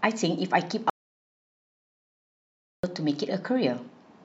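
At 0.90 s the speech just stops dead and the track goes to pure silence until 2.84 s, so you lose almost two seconds of talk. That's an audio dropout to silence. There's no room tone or hiss in the gap at all, which tells you the input itself went away, likely a dropped device, a broken link or an accidental mute, while the recorder kept writing silence. Everything spoken in that stretch is simply gone.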